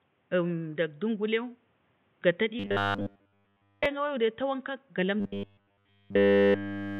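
Robotic sound from repeated short buffers occurs from 2.60 to 3.86 s and again from 5.20 s to the end of the clip. In both stretches the speech becomes a rigid, metallic buzz at 100 Hz that only loosely follows the words. The likely cause is fresh audio arriving too seldom, so the playback side kept looping a roughly 10 ms slice, which fits that 100 Hz pitch, in place of nearly all the real signal.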